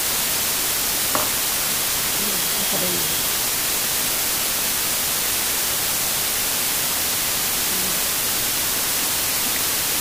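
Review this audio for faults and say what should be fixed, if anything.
The signal was stored at low bit depth with dither, using only about 3 bits, with dither added before each sample was rounded. That coarse rounding turns into an even, constant hiss that runs through the whole clip, sitting only around 15 dB below the wanted sound. Because of the dither there is no grainy distortion, just a steady noise floor that masks quieter detail. Record and export at 16 or 24 bits.

A loudspeaker feedback squeal begins at 1.70 s. A microphone was picking up a loudspeaker it was feeding, and at 3.3 kHz the loop gain rose above one. That tone feeds on itself, swelling over roughly 0.7 s into a piercing squeal about 5 dB louder than the program, and it lasts until the loop breaks at 3.33 s. Keep microphones out of the loudspeakers' coverage and reduce gain near 3.3 kHz.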